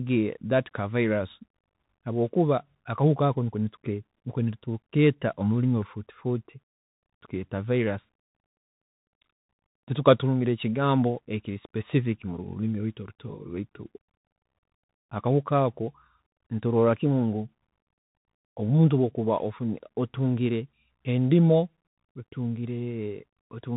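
Speech that sounds boxed-in and telephone-like from start to finish, with nothing above about 4 kHz, a grainy hiss lying under the voice, sibilants turned scratchy, and loud bright passages smearing into distortion. This is the Bluetooth CVSD headset codec, and its damage is plainly audible. Each sample is coded as a single up-or-down bit, which fits a 64 kbit/s link, and the adaptive step can't keep pace with fast, loud high-frequency movement, so it overloads, while its constant up-and-down stepping leaves that granular noise floor.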